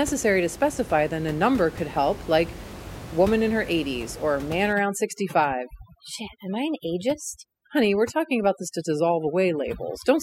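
From 4.73 s, just after "or man", to the end, overdone noise removal clamps bands near the room-noise floor, leaving twinkling specks.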